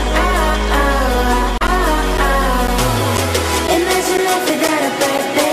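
From 1.67 s to 5.19 s, periodic USB or driver dropouts punch roughly 10 ms silent gaps every 0.5 s, so you hear a steady tick, about seven in all.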